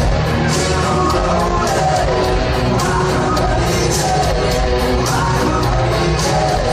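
No technical faults are audible.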